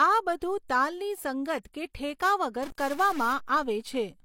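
At 1.62 to 1.65 s a pre-echo smears the onset of a sharp attack in the speech. About 28 ms of hiss arrives before the attack itself, because the codec spread its quantisation noise across the whole transform block. Reverb tails follow a sound, but this noise comes ahead of it.

From 2.63 to 3.33 s the audio takes on a distortion that tracks the waveform and also fills the quieter gaps with noise. This points to a likely stuck bit, where one data bit holds a fixed value and shifts roughly half the samples. That distinguishes it from steady background hiss, whose level does not depend on the signal.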